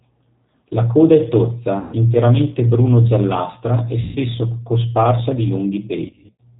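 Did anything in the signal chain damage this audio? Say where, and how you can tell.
Yes. Throughout the clip the speech is band-limited, with nothing above 4 kHz, and has a rough, slightly synthetic edge. This damage comes from the codec stage and fits G.729 at 8 kbit/s. The encoder doesn't keep the waveform. It sends a vocal tract filter, a pitch predictor and a handful of pulses per 10 ms frame, and the decoder rebuilds speech from those, so the fine texture between pulses is lost.

At 1.79 to 1.95 s and 4.01 to 4.17 s the speech is stretched out and fades, about 140 ms of missing audio each time. From 6.06 to 6.41 s there are shorter breaks scattered over about 340 ms, the longest around 50 ms. This is VoIP packet loss concealed by the speech codec, a network-stage fault. With packets missing, the decoder kept repeating its last pitch and filter at falling gain. Because each frame depends on the one before, the speech stays weak and distorted for a short while after packets return.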